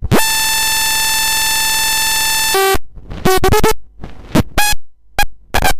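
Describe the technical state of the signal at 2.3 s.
A system hang loop runs from 0.30 to 2.55 s. The system froze while the audio hardware kept replaying its ring buffer, so one 46.4 ms piece repeats 48 times, which fits a 2048-sample buffer. It is heard as a rapid mechanical stutter at 21.5 Hz.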